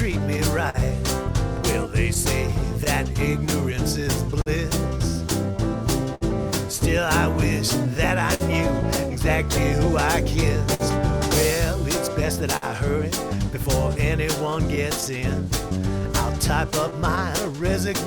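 Clock drift between sender and receiver runs through the whole audio: the sending side's clock is roughly 3 percent slow, so the receiver's jitter buffer keeps draining and the playback has to stretch itself to stay fed, leaving small, unevenly spaced timing hiccups throughout. Repeated timing corrections from 3.40 s to 17.64 s are the receiver's response to that drift: it plays at 99 percent speed by repeating short pieces of sound, adding roughly a tenth of a second in total. Scattered short gaps appear from 0.11 s to 8.43 s, where around ten late or lost packets were patched by continuing the preceding sound, the longest near 70 ms; again from 10.49 s to 12.65 s with about four patches up to roughly 50 ms; and from 14.50 s to 15.05 s and 16.90 s to 17.61 s with about three very brief ones each, around 15 ms at most, heard as small ticks and smears.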